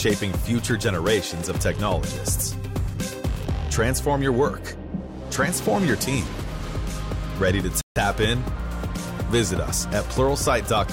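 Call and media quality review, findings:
Playback stall at 7.81 to 7.96 s: audio cuts to dead silence mid-flow for about 148 ms, then picks back up. Nothing tapers off beforehand, so it's a hard stop rather than a fade. Likely the player side: its buffer ran dry or the output thread got blocked, and nothing was fed to the device until it caught up. Worth checking buffer headroom and any scheduling hiccup around that moment.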